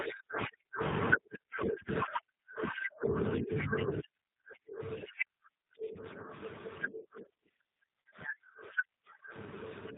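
Throughout, the speech passes through the G.729 codec, most likely its G.729A variant, and the roughness fits an 8 kbit/s stream. The decoder rebuilds each 10 ms frame from a vocal tract filter, a pitch predictor and a handful of pulses, so nothing above 4 kHz survives. The damage is plainly audible: the voice sounds band-limited, slightly rough and synthetic, with a coarse texture.

At 8.06 s comes VoIP packet loss concealed by the speech codec. About 60 ms of audio went missing, which fits three lost packets, and the decoder filled the gap by extending its last pitch and filter settings while lowering the level frame by frame. The speech is drawn out into a brief buzzy tone or coloured noise that fades, and because each frame depends on the one before, the voice comes back weakened or distorted rather than recovering cleanly.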